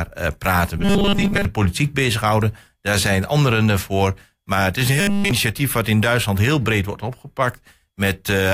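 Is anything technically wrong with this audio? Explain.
Yes. From 0.78 to 1.45 s, after "eh praten", and from 5.00 to 5.31 s, between "het is een" and "wat in", the speech turns into a rigid, metallic buzz at 200 Hz. It mostly replaces the speech in the first stretch and replaces it entirely in the second. This is robotic sound from repeated short buffers, likely from a 5 ms slice being looped while new audio arrives too late.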